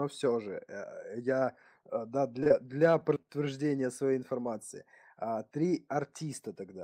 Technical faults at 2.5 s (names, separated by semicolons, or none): short stall from a late packet; short concealed packet loss